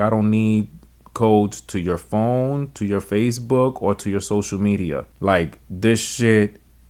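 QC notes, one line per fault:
Nothing stood out on listening to this speech recording.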